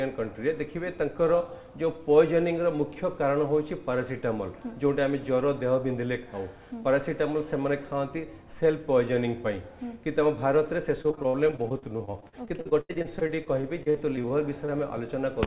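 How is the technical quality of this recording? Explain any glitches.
The recording has one clear glitch near the end. It is carried over a narrowband call path, and nothing above 4 kHz can be heard, which points to a telephone codec such as G.711.

Repeated packet loss (robotic sound) runs from 11.02 to 14.70 s. Dozens of short gaps, the longest about 79 ms, are patched by stretching the preceding sound. About a fifth of that span is filled this way, giving a choppy sound with pieces missing.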